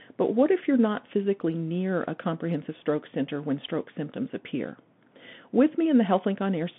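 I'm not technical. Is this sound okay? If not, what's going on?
No. Throughout, the speech carries Bluetooth CVSD headset codec damage. This squeezes speech through a basic headset link that keeps only roughly 150 Hz to 3.5 kHz, so the speech sounds thin and muffled, s sounds turn scratchy, and a grainy hiss sits underneath.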